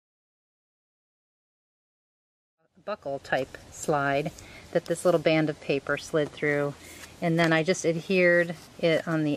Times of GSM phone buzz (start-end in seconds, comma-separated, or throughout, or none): none